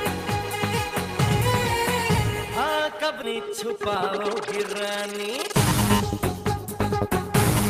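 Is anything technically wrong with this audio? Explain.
Yes, two faults stand out.

At 3.23 s there is a skip ahead: the sound lurches abruptly forward with no gap, as if about a second were simply cut out. That stretch was dropped, on the way or when an overfull jitter buffer discarded it, so the surrounding audio is spliced almost directly together.

From 4.60 to 5.32 s there is a jitter buffer speed-up: the audio runs about 6% fast at unchanged pitch, sounding slightly rushed. The receiver was holding too much audio and shed roughly 50 ms by repeatedly removing pitch-period-sized slivers to shrink its delay.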